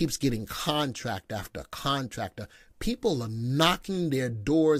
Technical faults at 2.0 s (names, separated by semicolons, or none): none